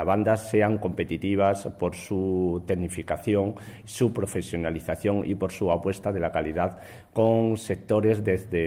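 No technical faults can be heard anywhere in the audio, and the signal stays steady and intact throughout.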